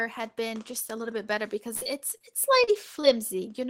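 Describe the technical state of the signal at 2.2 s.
A brief smear or wobble lasts from 2.17 to 2.22 s, where a short concealed packet loss occurred. About 20 ms of the call arrived too late to decode, and the receiver covered the gap by extending the preceding sound for 25 ms before blending back into real audio.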